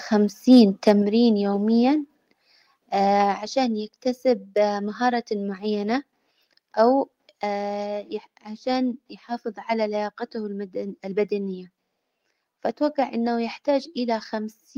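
A speech clip with harsh, crackly peaks at 0.51 to 0.6 s and 0.87 to 0.91 s. These are likely microphone overload, with a few percent of samples flattened, about 1 dB and then about 2 dB over the limit. At 1.02 s the voice and background drop together by about 4 dB. This sudden step likely comes from microphone volume stepped down after the distorted peaks.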